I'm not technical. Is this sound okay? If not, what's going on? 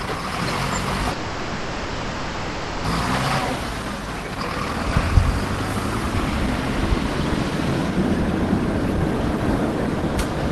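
No. From 1.11 to 2.86 s the sound stops moving forward: for about 1.7 seconds you hear the last moment stretched out into a buzzy, hissy hum instead of new sound. Then it picks up exactly where it left off, so nothing is skipped, but everything after that point arrives late. This is a call audio freeze, likely caused by data getting held up in transit while the receiving end filled the wait with a smeared copy of the last sound.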